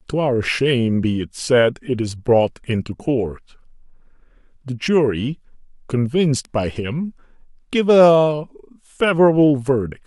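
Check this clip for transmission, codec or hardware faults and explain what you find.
No faults detected.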